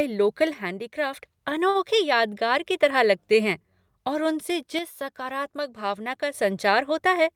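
From 0.54 to 1.13 s and again from 4.79 to 6.34 s, the speech abruptly drops by about 6 dB and then recovers. Each time, one channel drops out, most likely because one side of a stereo feed was lost before the mono sum, halving the shared content.

At 1.69 to 1.77 s, a short stall from a late packet holds the current sound for 58 ms while the jitter buffer sits empty. Nothing is lost, but everything after it runs 58 ms later.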